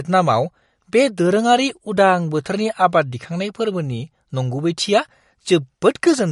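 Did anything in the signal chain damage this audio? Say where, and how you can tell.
Yes, at the codec stage, throughout: the speech has nothing above 11.2 kHz and plainly audible watery, swirling damage on s sounds, likely MP3 compression at a low bitrate around 48 kbps. Weak frequency lines switching on and off between frames distinguish it from plain low-pass filtering.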